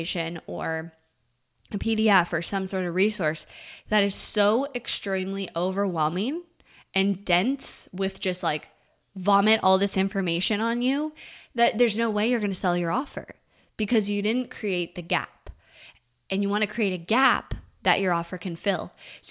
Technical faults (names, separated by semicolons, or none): none